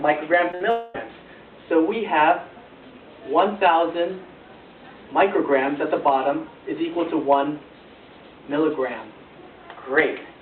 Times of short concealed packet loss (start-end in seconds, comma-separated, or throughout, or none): 0.51-0.55